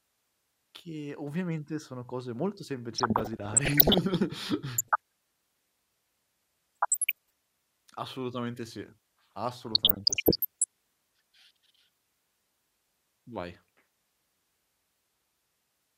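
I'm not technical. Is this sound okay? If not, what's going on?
No. The clip has DAB burbling: the digital radio signal was weak, so some of the data arrived damaged, and the receiver's error correction couldn't repair all of it. The damaged pieces came out as wrong sound, with narrow slices of the audio briefly jumping up or down in loudness. This heard as a burbling noise over the speech from 2.98 to 3.98 s, right after "ovviamente sono cose molto", and again at 4.78 to 5.0 s, 6.75 to 7.30 s and 9.67 to 10.64 s.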